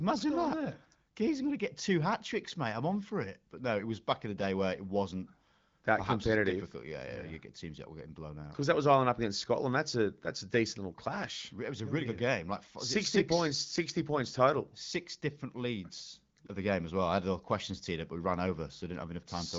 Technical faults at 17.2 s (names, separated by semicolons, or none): none